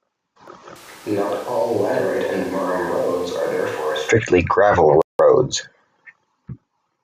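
From 0.76 to 4.09 s the speech turns abruptly hollow and roomy, about 10 dB quieter with less bass, likely a switch to a distant microphone. At 5.02 s the sound cuts to silence for 0.18 s and then resumes, likely a Bluetooth stall in which the headphone buffer ran dry awaiting resent packets.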